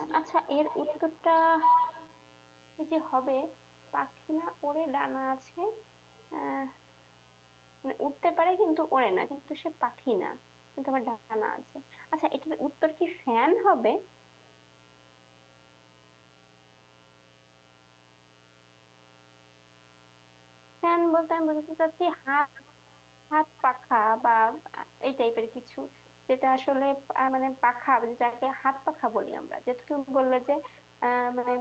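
It's a speech recording that came through a call, with the top end stopping around 8 kHz as you'd expect from Opus. A raspy mains buzz runs the whole 32 seconds, built on 60 Hz and its harmonics and sitting roughly 30 dB under the speech, most likely a dimmer, rectifier or unshielded lead feeding switching spikes into the line. From 0 to 4.45 s there's an echo leak: a copy of the talker trails by about 258 ms at around 10 dB down, likely the far end's echo canceller failing to fully remove its loudspeaker pickup. Between 1.19 and 2.20 s you get scattered short gaps, about five small packet losses, none longer than roughly 15 ms. The receiver covered each one by extending the previous sound, so they come across as quick ticks and little smears.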